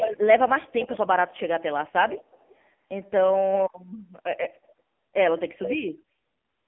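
Throughout, the audio carries heavy AMR narrowband mobile codec damage. Nothing above 3.5 kHz survives, and the line band sits at roughly 200 Hz to 3.5 kHz. The buzzy, synthetic texture fits one of AMR-NB's lower modes, around 6.7 kbps, where too few pulses per subframe drive the vocal-tract model. What sets it apart from simple band-limiting is that the sound is not just muffled but rebuilt, with a grainy, artificial edge.

An echo leak appears four times, each as a discrete copy of the audio arriving about 0.36 to 0.37 s late, likely from a loudspeaker side whose echo canceller let its microphone pickup through. From 0 to 0.18 s the copy is about as loud as the original. From 0.69 to 1.03 s it is noticeably quieter, and from 2.09 to 2.56 s it is faint. From 5.57 to 5.79 s it is noticeably quieter again. A fixed, separate repeat like this marks it as echo rather than room reverberation, which would smear into a continuous tail.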